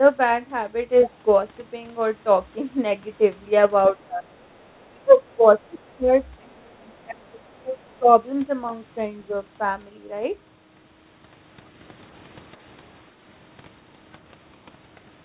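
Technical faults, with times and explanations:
1.04–1.16 s, 4.64–5.93 s and 7.89–7.93 s, other side's voice leaking through: the echo canceller likely failed to remove all of the far end's loudspeaker sound from the microphone, so a second voice slips in underneath. It is faint, about 20 dB below the talker in the first brief scrap, and far quieter, around 35 to 40 dB down, in the longer stretch and the final flicker. It comes through inside the narrow telephone band, which stops at 4 kHz.
3.93–4.47 s, 4.93–6.1 s and 6.43–8.09 s, speech suppressed in double talk: while both sides spoke at once, the echo canceller likely could not tell the talker from the returning echo and turned everything down. The talker's level sinks by about 25 dB in the first episode and about 20 dB in the other two. The dips add up to a bit under half a second, roughly 0.7 s, and about a second respectively, so the voice ducks and fades in pieces rather than staying steady.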